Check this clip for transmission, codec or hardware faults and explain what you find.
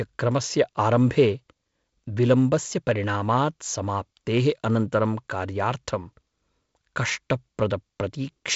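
Nothing stood out on listening to this speech, which carries the slight upper-band hiss and the 7 kHz ceiling expected of a G.722 wideband call.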